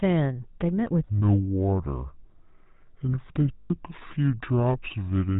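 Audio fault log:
Throughout, GSM full-rate codec: the speech has a buzzy, gravelly roughness, and nothing is heard above 4 kHz, so the top of the sound is dull and sibilants are blunted. This comes from a coder that models the vocal tract as a filter and drives it with a coarse, regularly spaced pulse train, discarding two of every three excitation samples. The plainly audible damage fits the 13 kbps full-rate GSM coder.
1.08 to 5.39 s, section at the wrong speed: from 1.08 s to the end, the speech turns slow and deep, running at 0.656 times its proper speed and sitting roughly seven semitones lower. Pitch and tempo drop together at the same moment, which points to the audio being played against the wrong clock rather than being pitch-shifted. The likely cause is a player or editing step that took this stretch at a mismatched sample rate.
1.19 to 1.23 s and 3.58 to 3.71 s, lost GSM frames: at each point the sound freezes into a rough, metallic ring instead of continuing naturally. 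The decoder is reusing the settings of the last good frame and usually lowering the level from the second lost frame on. The first gap lasts about 40 ms, which fits two missing 20 ms frames. The second lasts 120 ms, which fits six, and its ring is longer.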